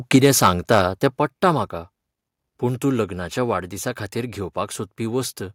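Microphone overload runs from 0.14 to 0.79 s, ending just before "तें पट्टा म्हाका". Peaks are driven about 6 dB past the converter's ceiling, and around one percent of samples have their tops sheared flat. This gives the loudest syllables a harsh, crackling edge, likely because the input gain was set too high.

Microphone volume stepped down at 0.16 s, falling about 4 dB at once inside that distorted stretch, and again at 1.17 s, about 6 dB, just before "पट्टा म्हाका". Voice and background drop together, likely because the call software lowered the device's input level in response to the clipping.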